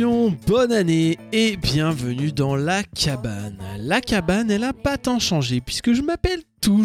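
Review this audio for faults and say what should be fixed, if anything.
There's a steady buzz running through the whole clip at 100 Hz, and it only shows up where there's signal. That's the classic sign of a resampler restarted on every block. The 48 kHz to 44.1 kHz conversion was done block by block, about 10 ms each, with no history carried over. So every block edge gets filtered against the wrong neighbouring samples, leaving a small error a hundred times a second. To prevent it, keep one resampler instance alive across the stream so its filter state carries from block to block.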